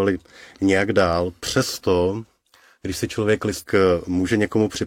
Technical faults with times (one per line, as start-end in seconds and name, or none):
3.58-3.63 stream segment skipped